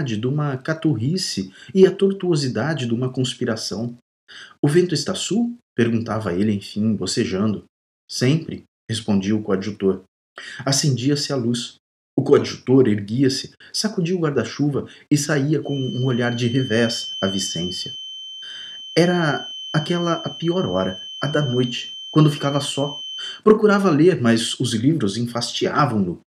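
A feedback whistle runs from 15.60 to 23.43 s: a thin, steady tone at 3.1 kHz sitting about 15 dB below the main sound, its level swelling and fading slowly as it holds. The cause is likely a loudspeaker-to-microphone loop balanced right at the edge of feedback, so that one frequency keeps recirculating and ringing on without building into a runaway howl. The tone persists for nearly eight seconds before dropping away.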